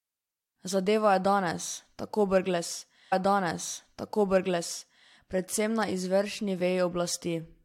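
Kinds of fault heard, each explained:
Stream segment repeated: the player queued or fetched the same chunk of the stream twice, so roughly 2.0 s of speech plays again, from 3.11 s to 5.11 s, just before "predvsem na izvršni", adding about 2.0 s overall. A small blip marks the jump back. On a spectrogram the same block of harmonic and formant patterns appears twice in a row, separated by a thin vertical click line. The waveform shows a matching envelope duplicated with an abrupt sample discontinuity.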